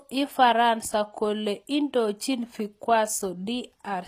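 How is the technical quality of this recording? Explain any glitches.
The technical quality is compromised by plainly audible codec damage that runs through the whole recording. The treble sounds synthetic: s sounds come across gritty and lisping, with a metallic sheen where sharp consonants should be crisp, and nothing at all reaches above 14.9 kHz. The likely cause is HE-AAC compression at a rate that fits about 24 kbps. Only the lower spectrum is truly coded. The upper bands are rebuilt by copying lower content upward under a coarse envelope, so the brightness is there but its detail doesn't match the original.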